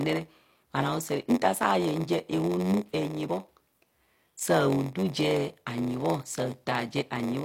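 From start to end, the speech carries a steady buzz at about 93.8 Hz and runs slow, at 0.938 times normal speed, while its timbre stays about where it should be. This is a block size mismatch (padded): one stage hands over shorter blocks than the next reads, and the shortfall in each is filled with zeros. The buzz rate fits a 512-sample read block, and each inserted silent gap stretches the timing.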